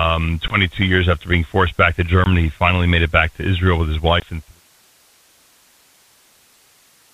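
Packet loss on an ADPCM call drops about one 20 ms packet three times: at 0.48 to 0.6 s just before "years after being forced", at 2.24 to 2.27 s between "being forced back to" and "he finally made it", and at 4.2 to 4.27 s between "with his" and "and three sons". Each lost packet becomes a hard-edged silent gap. Because the decoder's adaptive predictor and step size no longer match the sender's, the speech comes back with brief, slight distortion, then settles within a few tens of milliseconds. The narrow telephone band fits G.726 ADPCM at around 32 kbit/s, and the third gap falls inside the smooth fade-out that ends at 4.62 s.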